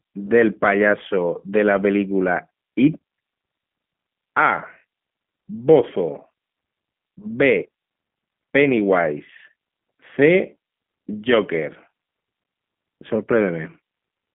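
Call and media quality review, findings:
G.729 codec damage throughout: rough, synthetic speech, band-limited to 150 Hz to 3.4 kHz. The spectrogram shows a hard empty ceiling above 3.5 kHz and smeared harmonics. This fits 8 kbit/s CELP coding.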